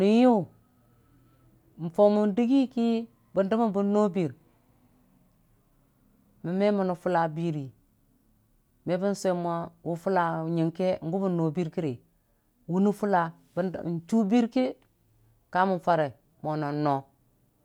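Listening through this speech recording, nothing stood out as a technical problem at any point.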